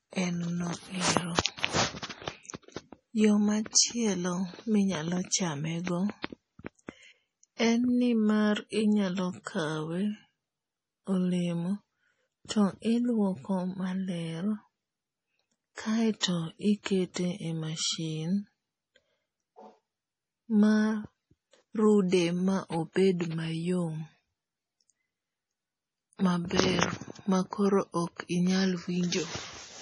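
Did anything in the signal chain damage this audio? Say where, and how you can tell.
Yes. At the codec stage, the speech stops dead at 11.3 kHz throughout, with watery, swirling sibilants and smeared onsets. The damage is heavy enough to fit a bitrate near 32 kbps, likely from MP3 compression. A plain low-pass filter would cut the treble without making the remaining band swirl.

Pre-echo, also from the codec, puts a brief hiss ahead of sharp onsets at 3.73 s, 5.85 s, 16.20–16.23 s, 17.14–17.16 s, and 22.09–22.12 s just before "ma obed", spreading 17 to 36 ms. Block-wide quantisation noise leaks backwards, so unlike a click, it builds before the attack.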